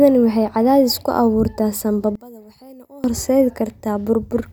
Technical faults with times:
2.15-3.04 one channel inverted

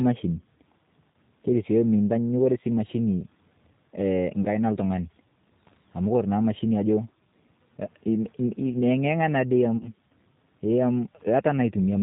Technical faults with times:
0.00-12.03 G.729 codec
1.12-1.17 VoIP packet loss concealed by the speech codec
4.43-4.47 VoIP packet loss concealed by the speech codec
9.77-9.93 VoIP packet loss concealed by the speech codec

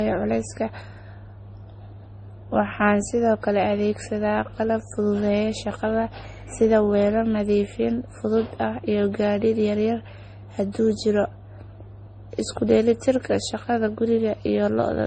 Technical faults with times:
0.00-15.06 transcoding between lossy codecs

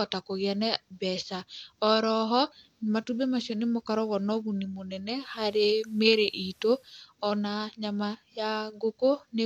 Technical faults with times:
5.08-7.07 digital radio blending to analogue

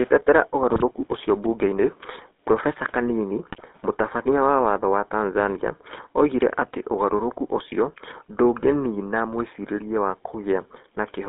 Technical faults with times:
0.00-11.29 GSM full-rate codec
0.70-0.83 GSM bit errors
3.50-3.61 GSM bit errors

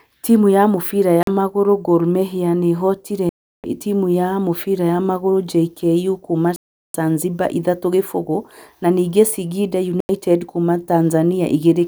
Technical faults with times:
1.23-1.28 Bluetooth stall
3.29-3.64 Bluetooth stall
6.56-6.94 Bluetooth stall
10.00-10.09 Bluetooth stall

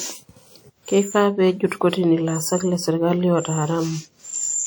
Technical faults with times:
0.00-4.67 WMA compression

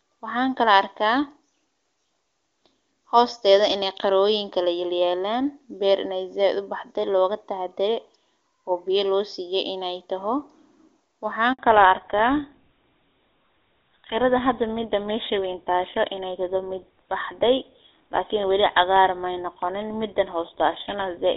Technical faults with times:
11.53-11.59 handover gap
11.59-21.36 fallback to narrowband

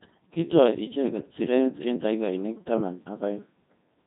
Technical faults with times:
0.00-4.06 Codec 2 vocoder

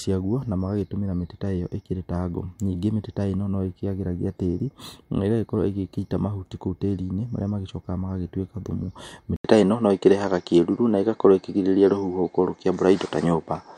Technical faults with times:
9.36-13.78 input switched to a poorer device

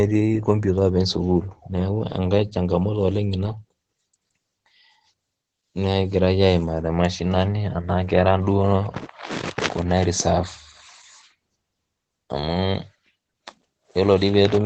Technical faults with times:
0.00-14.65 Opus voice compression

